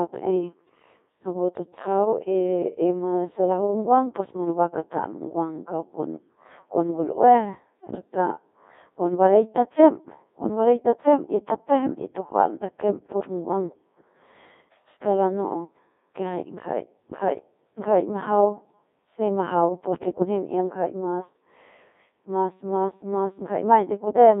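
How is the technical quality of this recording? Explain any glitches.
Technical quality is poor. The speech runs through the Codec 2 vocoder for the whole clip. Codec 2 sends only pitch, voicing, energy and a rough spectral envelope, and the decoder rebuilds the voice from sine waves. The original waveform is gone. The damage is heavy, which fits a rate near 1.6 kbit/s. The band sits between 250 Hz and 3.7 kHz. The voice sounds robotic and buzzy.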